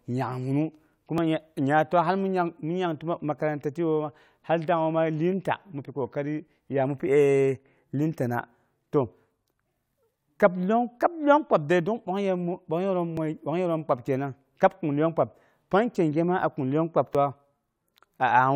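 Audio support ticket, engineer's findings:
Micro-skips in speech at 1.18 s, 13.17 s, 17.15 s. Overlap between stream segments: overlapping segment timestamps cause the player to trim real audio, dropping about 13 ms, 6 ms and 5 ms. Waveform jumps at each cut. Spacing fits 4 s segment boundaries.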